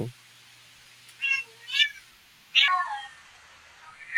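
A section at the wrong speed runs from 2.68 s to the end of this speech clip at 4.18 s, where the audio suddenly plays at about 0.655 times its proper rate. Pitch and tempo drop together, roughly seven semitones lower, so the voice turns deep and dragged out at that point. Because both shift in lockstep rather than pitch alone, this is likely a playback or editing clock mismatch applied to the final stretch.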